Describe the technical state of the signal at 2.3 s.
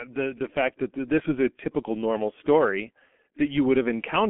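The G.723.1 codec runs through the whole clip, including 2.3 s. Its slow 6.3 kbit/s voice model and 30 ms frames leave speech muffled and hoarse. Nothing is heard above 3.8 kHz, and consonants blur.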